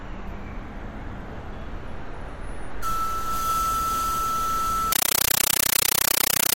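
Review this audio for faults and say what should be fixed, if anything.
Compressed stream played as audio, from 4.92 s to the end at 6.57 s: the sound gives way to loud chattering static. It is made of 9.33 ms noise bursts separated by silence, repeating 31.25 times a second, which fits an undecoded AC-3 bitstream being played as ordinary samples.

To prevent it, set the receiving device to decode the bitstream or switch the link output to PCM, so encoded frames never reach the speakers directly.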